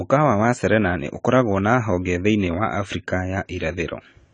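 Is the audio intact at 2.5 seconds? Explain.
No, at 2.5 seconds the speech carries the same AAC compression damage heard across the whole clip. Nothing survives above 9.8 kHz, and the sound is dull and smeared with a fizzy, warbling edge on sibilants, which fits a likely low-bitrate AAC-LC encode around 24 kbps.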